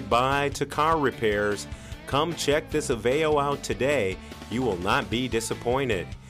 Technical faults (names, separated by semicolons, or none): none